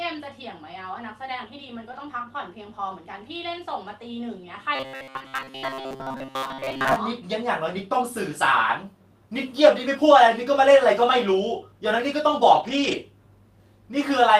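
At 1.91 to 2.01 s, and again at 12.55 to 12.93 s, a lost packet is rebuilt from error correction: about 60 ms, then 200 ms, of lower-bitrate copies play without a gap but sound rougher and noisier. Between 4.75 and 6.96 s, robotic sound from repeated short buffers gives a rigid metallic buzz near 133 Hz, likely from late audio being padded with a repeated 7.5 ms buffer most of the time.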